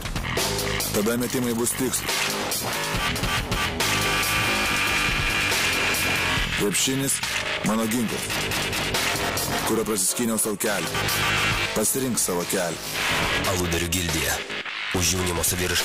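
Periodic USB or driver dropouts occur from 0.19 s to 2.18 s: about ten short gaps, each around a millisecond of silence, recur every 0.25 s. They tick regularly through the signal as something stalls the USB bus or audio driver on a fixed interval.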